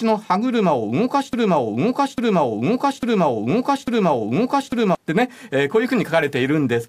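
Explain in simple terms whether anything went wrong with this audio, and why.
From 1.33 to 4.95 s, a broken-record loop repeats one 0.85-second piece of speech four times. Playback likely stalled. The speech for that stretch is lost.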